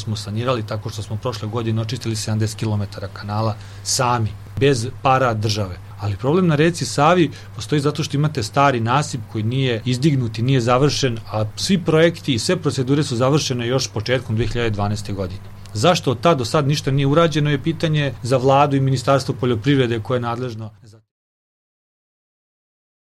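No technical fault can be heard in the audio. Near the end, a smooth fade-out begins at about 19.5 s and brings the level gently down by 21.12 s, with no click or hard edge.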